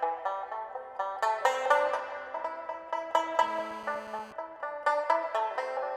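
A hard, raspy GSM phone buzz at about 217 Hz with dense harmonics runs from 3.43 to 4.33 s, steady rather than intermittent; its rasp distinguishes it from smoother mains hum.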